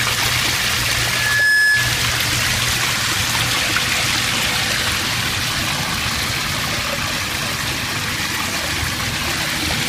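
From 0.92 s to 2.12 s there is loudspeaker feedback squeal. A microphone is picking up the loudspeaker it drives, and at 1.7 kHz the gain around that loop has gone above unity. The tone feeds on itself, swelling over roughly half a second until it sits around 5 dB above the rest of the sound.

At 3.05 s to 3.10 s come repeated frames: a 52.2 ms stretch is played once more straight after itself, which fits two compressed frames being sent or written twice. It is heard as a brief stutter, and the audio runs 52.2 ms longer than it should from that point on.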